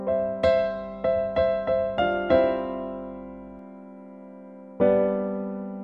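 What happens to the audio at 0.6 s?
A steady low 50 Hz drone, mains hum, sits well beneath the sound from 0.61 to 3.59 s, as a ground loop or nearby transformer couples in the power line.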